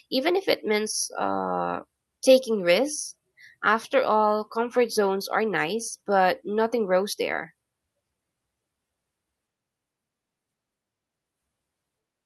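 No technical faults are audible.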